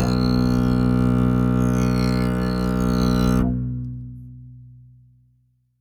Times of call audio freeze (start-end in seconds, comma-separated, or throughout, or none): none